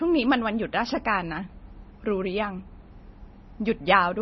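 Speech that sounds watery and swirly from start to finish, with nothing above 5.9 kHz and s sounds that chirp and smear. The damage is heavy and is likely MP3 compression at a low bitrate around 24 kbps: the encoder cuts the treble and drops weak frequency lines that flicker between frames.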